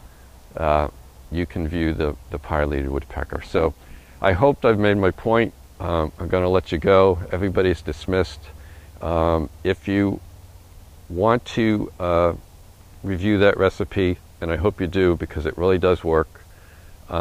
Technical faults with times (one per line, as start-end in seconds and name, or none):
3.22-4.28 overlap-add ripple